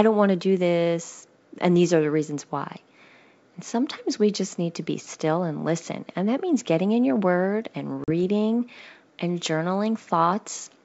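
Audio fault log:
8.04–8.11 s, packet loss on an ADPCM call: just after "in your word and", a couple of packets, about 40 ms of audio, vanish and are filled with hard-edged silence. What separates this from a plain dropout is the aftermath. The decoder's predictor and step size have lost track of the sender's, so the speech comes back slightly distorted. It settles within some tens of milliseconds, in the clear wideband G.722 sound.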